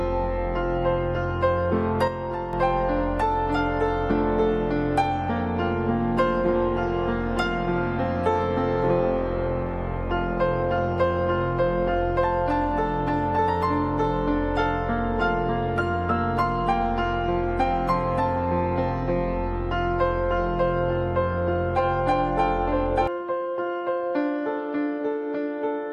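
At 2.08 s the level drops abruptly by about 6 dB and stays down until 2.53 s, where it snaps back up. This is a sudden gain jump: the signal and its background noise fall and recover together, with no fade in either direction, so the step is heard as a level change in the whole mix rather than in the source alone. The likely cause is a digital gain setting applied instantly, sample to sample, without a ramp.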